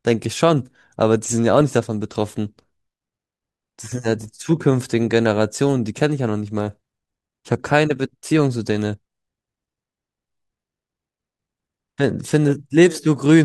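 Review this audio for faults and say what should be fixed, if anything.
Nothing needs fixing; no faults are audible here.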